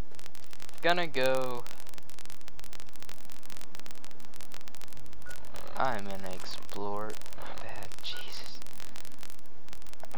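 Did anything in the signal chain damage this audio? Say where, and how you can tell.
Yes, at the digital interconnect. Word clock ticks run from 0.10 s to 10.16 s, roughly every 20 ms, hundreds in all. The receiver runs on its own clock, around 1000 ppm off. Each slip drops or repeats one sample, causing a tick.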